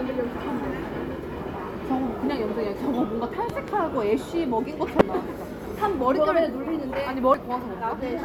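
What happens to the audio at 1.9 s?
Nothing goes wrong at 1.9 s; the sound carries on intact through that moment.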